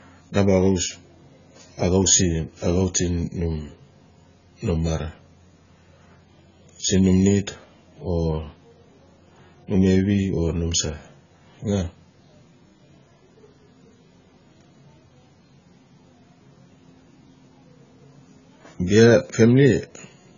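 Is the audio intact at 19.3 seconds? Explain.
No, the speech at 19.3 s sounds dull and smeared with nothing above 7 kHz, as it does throughout, likely from heavy AAC compression at around 16 kbps discarding high frequencies.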